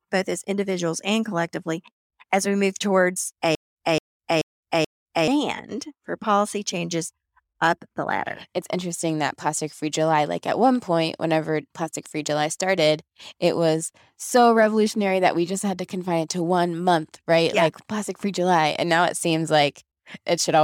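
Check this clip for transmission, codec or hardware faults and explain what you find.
One transmission fault is present. From 3.55 to 5.28 s, just after "as we move towards", there is a stutter with silent gaps. A 220 ms fragment repeats four times, each followed by about 212 ms of dead silence, giving a steady 432 ms cycle. The likely cause is a stalled stream replaying its last buffer on each retry. The true digital silence between the repeats sets this apart from a plain loop or from echo.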